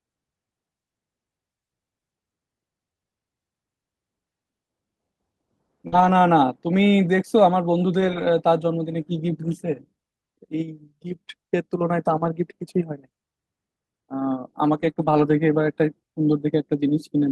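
At 5.87 s a burst of packet loss hits. Audio stops arriving for a moment. The receiver stretches the last sound for about 48 ms and fades it down. Playback then resumes further on, with roughly 40 ms of the speech skipped.

Lost packets rebuilt from error correction follow at 5.92 to 6.14 s, 8.00 to 8.22 s, 9.44 to 9.50 s, 11.12 to 11.14 s and 12.16 to 12.26 s. Each lost packet is replaced by a low-bitrate copy carried in the next one, so no gap opens. These stretches sound rougher and noisier. Their lengths run from 20 to 120 ms, which fits 20 ms packets.

The same repair returns at 14.73 to 14.91 s. A short concealed packet loss follows at 14.93 to 14.98 s. About 21 ms is filled by continuing the preceding sound and blending back, giving a brief smear. Error-correction rebuilding then resumes from 14.98 to 15.32 s, another rough, noisy stretch.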